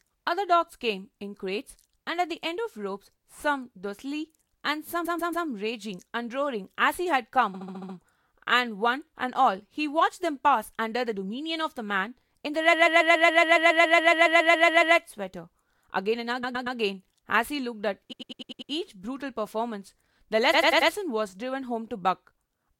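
Speech with repeated frames: short runs of compressed frames were sent or written more than once, so the decoder replays the same slice of audio and the speech stutters. The looped block and its extra plays are 139 ms three times at 5.04–5.46 s, 70 ms six times at 7.53–7.95 s, 139 ms sixteen times at 12.72–14.95 s, 116 ms three times at 16.43–16.77 s, 99 ms six times at 18.11–18.70 s, and 93 ms four times at 20.53–20.90 s. Together these stretch the clip by about 4.4 s.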